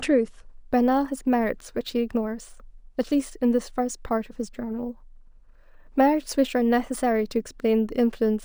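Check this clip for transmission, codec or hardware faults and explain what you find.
One fault is present: crude rate conversion, running from 0.51 s to the end of the speech.

From 0.51 s the audio has been resampled up by a ratio of 1.5, which fits a 32 kHz source converted to 48 kHz, by simply repeating the nearest sample with no filter. The resulting error sits roughly 30 dB below the signal and is heard as a gritty, inharmonic fizz that rides on louder and brighter syllables. On a waveform, zoomed in, the trace shows a stepped pattern of duplicated samples repeating every three output samples. On a spectrogram, faint mirrored copies of the speech energy appear above about 16 kHz, with tones that don't follow the voice's harmonics.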